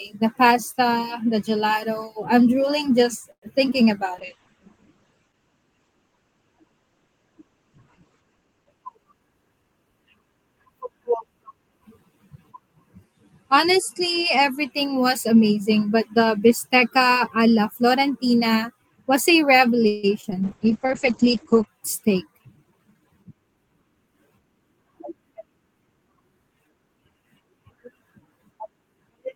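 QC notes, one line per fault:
3.31–3.44 s, call audio freeze: Just after "drooling just", the sound stalls. The last sound is stretched into a short fading buzz and then drops to about 80 ms of silence. The likely cause is packets held up in transit, which let the jitter buffer run dry. When the audio resumes it picks up where it stopped, so nothing is lost. A gap of about 110 ms is inserted instead, and the call's delay grows by the same amount.
3.70–3.83 s, short concealed packet loss: About 20 ms of audio never reached the decoder in time. The receiver extended the preceding sound for about 8 ms and then blended back into the real signal, adding a few milliseconds. It comes across as a brief smear or wobble rather than a clean dropout.
4.15–9.91 s, call bitrate drop: The bandwidth estimate fell, and the encoder went from 32 kbps to 10 kbps, holding the lowest rate for about 4.1 s. At that rate Opus codes coarsely and narrows the audio band from 20 kHz to 8 kHz. 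The sound turns muffled, rough and watery until the rate climbs back.
8.97–9.71 s, jitter buffer speed-up: Near the end of the low-bitrate stretch, the buffer held more audio than its target. To cut the delay, the receiver snipped out short pitch-period pieces in quick succession, removing about a tenth of a second in total. Playback runs at about 113% speed with the pitch unchanged, so the sound feels hurried.
19.87–20.05 s, call audio freeze: After "was a", the last sound is drawn out as a fading buzz for about 158 ms, with no silent stretch this time. As before, the likely cause is a late batch of packets draining the jitter buffer. Playback then continues from the point it stalled. Nothing is missing, but the delay grows by about 158 ms.
20.21–20.25 s and 20.31–20.33 s, short concealed packet loss: Two more 20 ms holes follow closely. The receiver covers them with about 15 ms and 4 ms of continued sound, respectively, before crossfading back. 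The second one also trims some delay. Each is heard as a quick smear or wobble.
20.44–21.73 s, call bitrate drop: The encoder is again throttled from 32 kbps, this time down to 9 kbps, for about 1.2 s at the bottom. The bandwidth again narrows from 20 kHz to 8 kHz, leaving a short muffled, coarse patch.
22.07–23.25 s, jitter buffer speed-up: The buffer has built up excess audio again, and the receiver removes short pitch-period segments back to back, about 150 ms in all. The sound runs at about 111% speed at the same pitch and is noticeably rushed.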